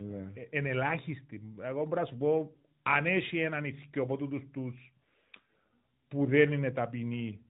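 From start to finish the speech carries tandem speech coding. Nothing is present above about 3.8 kHz, and the roughness and warble point to two lossy speech coders in sequence, consistent with an ADPCM stage such as G.726 at 32 kbit/s, passing through a G.711 link, followed by AMR-NB at 12.2 kbit/s. The second coder re-quantises artefacts already introduced by the first, so the speech sounds more muffled, grainier and less stable than either stage alone would leave it.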